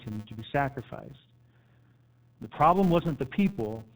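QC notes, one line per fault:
Throughout: G.729 codec. The speech is band-limited with nothing above 4 kHz, and it sounds plainly rough and synthetic, consistent with 8 kbit/s G.729A rebuilding speech from a filter and sparse pulses.
Throughout: filter restarted on every block. A steady 200 Hz buzz tracks the speech level, as each block, likely 5 ms long, starts from silence and opens with a small transient.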